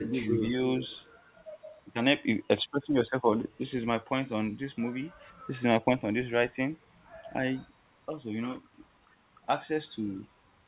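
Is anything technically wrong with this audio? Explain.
Yes, there are two kinds of fault early in the speech. From 0.0 to 0.16 s and again from 0.47 to 0.55 s, there is speech suppressed in double talk: the level dips by roughly 20 dB, then only slightly, likely because an echo canceller turned the talker down while the far side spoke. On a waveform these show as sudden notches in the envelope.

From 0.83 to 0.99 s, a faint echo leak is audible: a copy of the voice delayed by 314 ms and about 20 dB below it, likely residual loudspeaker pickup. On a spectrogram it appears as a weak, shifted repeat of earlier speech patterns, all of it within the narrow band that stops near 4 kHz.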